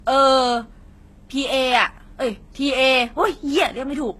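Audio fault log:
throughout: transcoding between lossy codecs. Nothing above 12.3 kHz, with smeared, warbly artefacts from two codec types layered together, likely a low-rate HE-AAC stage re-encoded to Vorbis, unlike single-codec compression.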